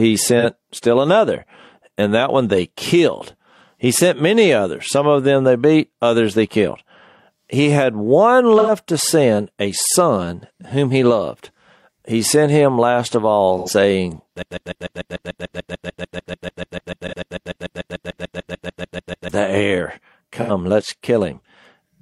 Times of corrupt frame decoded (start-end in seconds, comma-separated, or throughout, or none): none